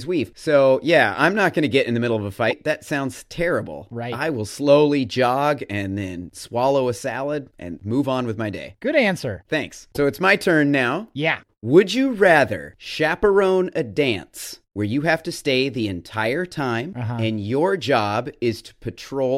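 Speech, with two brief glitches. At 2.50 to 2.53 s, right after "the middle of a", and at 9.94 to 9.97 s, just before "it's my turn now", the audio jumps ahead. The likely cause is a broken MP3 bit reservoir. Frames were lost, so the next frame fetched borrowed bytes from the wrong place. Each glitch lasts about one frame, which fits 26 ms MP3 frames.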